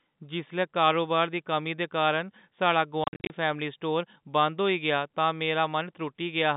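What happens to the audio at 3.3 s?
At 3.3 s, packet loss filled with silence ends: from 3.04 s, just after "कमी दे कारण साढ़ा", about 200 ms of audio drops out in silent holes up to 50 ms long, with hard edges rather than smoothed concealment.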